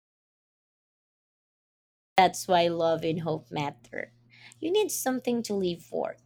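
From the very start until 2.18 s the clip is dead silent, with no room tone at all, and the speech then cuts in at "why love and hope". This is an audio dropout to silence, likely from the input being lost while the recorder kept writing zeros.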